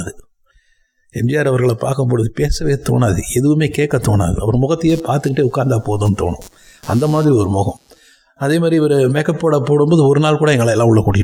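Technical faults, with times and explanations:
4.89 to 7.99 s, computer activity noise: a buzzing chirp pulsing at roughly 150 Hz appears, sitting about 30 dB below the program level, then stops. It comes from load changes in the computer's processor, graphics card or mouse disturbing the ground that the audio circuit shares, so its timing follows what the machine is doing. Mains hum would hold steady at a fixed frequency, but this noise starts and stops on its own, independent of the recorded sound.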